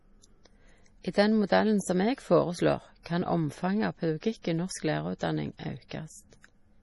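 Heavy MP3 compression, likely at a bitrate near 32 kbps, runs through the whole speech recording: starved of bits, the encoder drops everything above about 11.4 kHz and lets weak frequency detail flicker between frames, leaving the speech dull, watery and swirly, with smeared consonant attacks.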